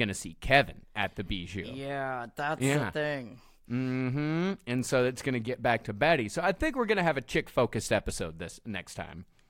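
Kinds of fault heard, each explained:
No technical faults detected in the speech.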